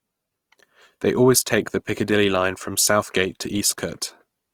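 From start to end, the speech sounds grainy and rough. This is likely Opus compression, its music mode filling starved bands with noise, which fits about 24 kbps.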